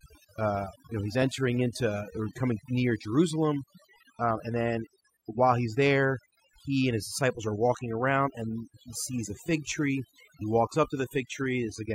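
A speech recording with overdone noise removal throughout: pauses fall to near silence sprinkled with twinkling specks, and the voice loses its quieter bands as they vanish along with the noise. Unlike a noise gate, which shuts everything at once, this strips individual frequency bands independently.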